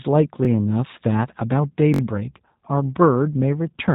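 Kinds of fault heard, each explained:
G.729 codec: The speech runs through a low-rate VoIP codec at 8 kbit/s. It rebuilds each frame from a vocal tract model and a few pulses. Nothing passes above 3.8 kHz. The result sounds plainly rough, dull and synthetic throughout.
Repeated buffer: Playback ran short of fresh audio, so the last block was played again. At 0.45 s a roughly 21 ms piece sounds twice. At 1.94 s to 2.01 s it sounds four times, a longer stutter. The length fits a 1024-sample buffer.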